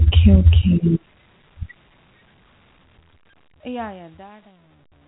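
Nothing stood out on listening to this speech clip.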